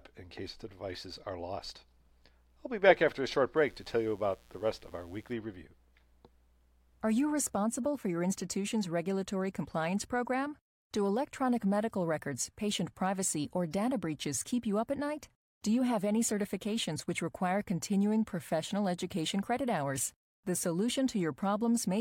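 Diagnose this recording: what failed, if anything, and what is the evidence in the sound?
The analogue wiring picked up a mains buzz from 3.56 to 5.33 s, right after "back after a short". It sits roughly 35 dB below the speech. A dimmer, rectifier or unshielded run injects switching spikes twice per 60 Hz cycle. That gives 120 spikes a second, whose harmonics of 60 Hz climb into several kHz as a raspy tone. On a spectrogram this appears as stacked horizontal lines spaced 60 Hz apart; the waveform shows regularly repeating sharp ticks.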